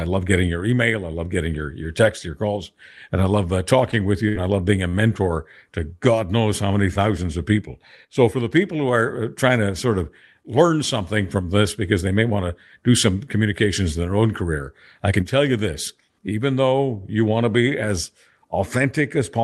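At 4.28 s a burst of packet loss drops about 60 ms of audio; the receiver stretches the last sound for roughly 64 ms, fading it, before skipping ahead. At 4.89 s a short stall from a late packet empties the jitter buffer, so the sound is held about 46 ms too long, then resumes with nothing lost.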